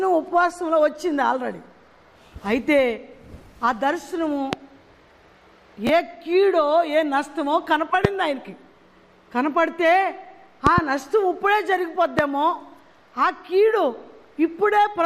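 Sharp pops cut through the audio at 4.53–4.55 s, 8.05–8.07 s and 12.19–12.21 s, with a pair of pops in quick succession between 10.67 and 10.80 s. Each stands roughly 20 dB above the surrounding sound, which carries on beneath them. These are loud pops, and the likely cause is a sudden voltage step or pulse, from a plug, a switch, static or a driver glitch, entering the signal path and being shaped by the circuitry after it. At 5.87–5.89 s there is a brief jumbled moment where the flow of sound stumbles. This is chunks out of order: one 10 ms block arrived or was written a single chunk late and plays after the block that should follow it. Nothing is missing, but the swapped sequence leaves hard joins where the audio doesn't line up.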